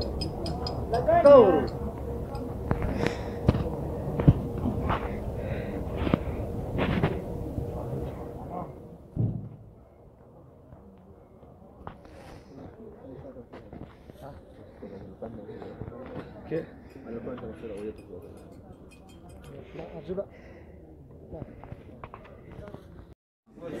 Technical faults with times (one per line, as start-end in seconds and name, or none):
8.07-9.39 zipper noise